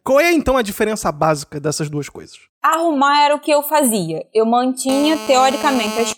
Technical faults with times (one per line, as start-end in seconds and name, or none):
4.89-6.13 GSM phone buzz